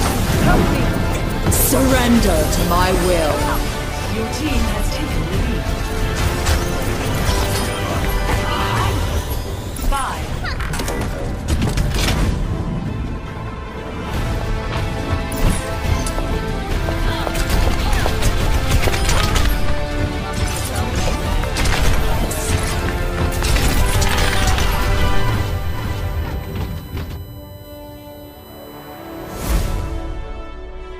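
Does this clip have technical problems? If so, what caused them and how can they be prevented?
Yes. From 23.41 s to 29.47 s there is USB whine: a fixed-pitch tone built on 1 kHz, with its strongest component at 14 kHz, sitting roughly 25 dB below the sound. The bus draws current in 1 ms frames, and that periodic load leaks into the audio through shared power or ground. Mains hum sits at 50 or 60 Hz and its harmonics, so the 1 kHz spacing marks this as USB whine. To prevent it, power the interface separately or use a USB isolator.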